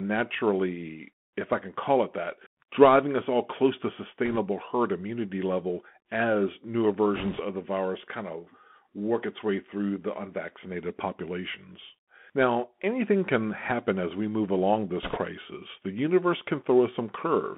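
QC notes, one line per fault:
Throughout: Bluetooth CVSD headset codec. The speech sits in a narrow band of roughly 150 Hz to 3.4 kHz, with nothing above that, which fits a 64 kbps CVSD headset link. The codec sends one up-or-down bit per sample with an adapting step, so it lags on fast, loud high-frequency movements. That produces audible slope distortion, scratchy sibilants and a granular hiss under the speech.
4.25–4.39 s, 7.16–7.42 s, 15.03–15.18 s: bit errors on a Bluetooth voice link. The first burst falls after "us all close to" and before "herd immunity level as". The second follows "immunity level as newer" and precedes "the virus kind of". The third follows "as we move along". Each brings a rushing crackle rather than sharp clicks, because each CVSD bit carries only a small step and its error decays away. The error rate is around 1.5 percent in the first burst and about 3 percent in the later two, which sound rougher.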